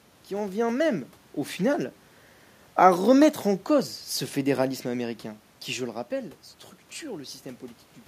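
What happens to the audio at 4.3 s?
Nothing goes wrong at 4.3 s; the speech there comes through intact.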